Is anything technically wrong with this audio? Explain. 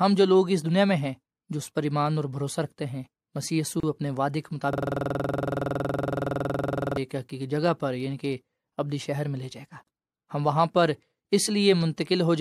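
Yes. The speech has two kinds of fault.

At 3.80 s and again at 9.83 s there is a gap at a join of encoded pieces. Silences of about 32 and 37 ms cut in, six seconds apart. Separately encoded pieces kept their start delay and end padding. The speech then resumes where it stopped.

From 4.73 to 6.97 s a system hang loop takes over. The system froze while the hardware kept replaying its ring buffer. One 46 ms slice repeats dozens of times at 21.5 Hz. This fits a 2048-sample buffer and produces a rapid stutter-buzz.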